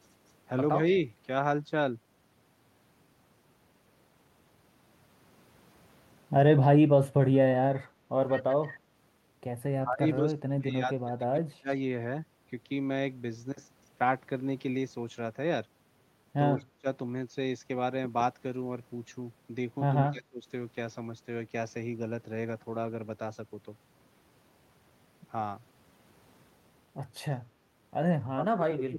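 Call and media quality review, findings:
Echo leak, 8.28–8.73 s. Delayed copy of the speech returns about 162 ms late, roughly 15 dB under the talker. Likely far-end echo canceller passing residual loudspeaker pickup.

Speech suppressed in double talk at 9.82–11.7 s, 16.57–16.87 s, 20.11–20.46 s, and 28.18 s to the end. The talker's speech drops by roughly 25 to 35 dB during overlap. Likely the echo canceller attenuating near-end speech along with the echo.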